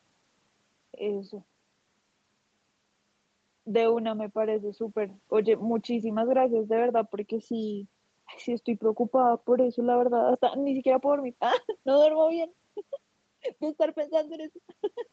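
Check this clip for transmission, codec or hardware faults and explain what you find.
Nothing stood out on listening to this speech, which carries the ordinary band limit of a call connection with no content above about 8 kHz.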